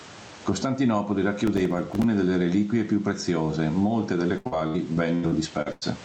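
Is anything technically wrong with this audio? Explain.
Yes, three faults can be heard in this speech.

Gain pumping runs through the whole clip. The input gain is likely set far too high for the microphone, so a fast limiter keeps clamping down on every loud syllable and then releasing. The level swings by about 15 dB. The speech sounds squashed, with loud and soft parts pressed close together.

Processor overload crackle occurs from 1.47 to 2.04 s, ending just before "delle reliquie più preziose". The processor fell behind and missed some twenty buffer deadlines over this stretch, which fits a buffer of a few milliseconds. Each missed buffer was filled with silence, leaving a tiny hard-edged dropout. Strung together, these dropouts make a gritty, tearing crackle over the speech that stops once the load eases.

Repeated packet loss (robotic sound) occurs from 4.37 to 5.83 s, right after "reliquie più preziose molte". 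Audio packets went missing again and again, leaving eight gaps, the longest 96 ms. Each hole was patched by stretching the last bit of sound, which covered about a third of the stretch. The speech turns choppy, with pieces dropped out.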